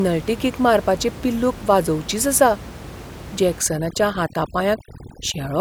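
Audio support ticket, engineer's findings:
Artifacts from 3.61 s to end of clip; background drops and breaks up into twinkling specks. Overdone noise removal: suppressor too aggressive, pulling individual frequency bands down or out wherever they sit near its noise estimate, taking quiet speech detail with them. Room noise before 3.61 s sits about 16 dB under the speech.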